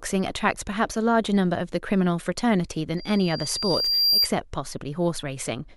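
From 2.97 s to 4.30 s the speech is overtaken by loudspeaker feedback squeal: a single 4.8 kHz tone swells over roughly a second to about 5 dB above the voice. Its steady growth at one pitch marks a microphone re-amplifying its own loudspeaker, unlike a constant interference whine.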